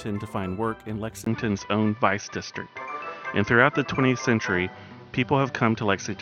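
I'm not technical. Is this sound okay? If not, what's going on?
No. At about 1.24 s the sound suddenly turns duller and more boxy, as if heard through a cheaper microphone, and stays that way until the end. There is a tiny gap of about 20 ms right at the change, the level shifts a little, and a new faint background noise appears. The likely cause is an input switched to a poorer device partway through, which cuts off the brighter detail above about 6.3 kHz.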